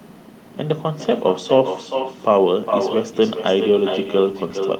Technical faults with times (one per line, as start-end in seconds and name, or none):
0.00-4.79 echo with no canceller